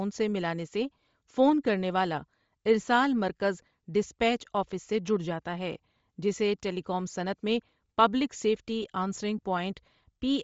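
Throughout the speech there is plainly audible codec damage, most likely Bluetooth LC3 compression. The upper spectrum is zeroed in places and refilled with noise, giving a breathy, grainy edge. On a spectrogram the top band looks speckled and patchy, which fits roughly 32 kbps with 7.5 ms frames.

From 8.82 to 8.84 s, right after "صنعت میں پبلک سیفٹی", there are lost LE Audio frames. The decoder repeats the previous spectrum with scrambled signs, so the sound becomes a brief noisy smear. The waveform shows a short, fuzzy patch, and the spectrogram a smeared column lasting about 15 ms, which fits two missing 7.5 ms frames.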